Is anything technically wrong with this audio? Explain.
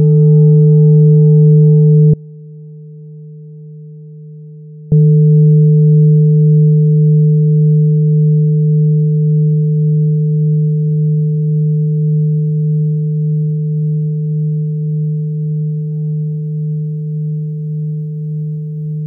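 Yes, there's an audio dropout to a faint residue from 2.14 s to 4.92 s. The sound cuts out abruptly for about 2.8 s. What's left in the gap is a faint leak of it, sitting roughly 25 dB below its normal level. It then snaps straight back rather than fading. The likely cause is the wanted signal being lost upstream while everything after the break stayed live, so only that weak bleed made it through.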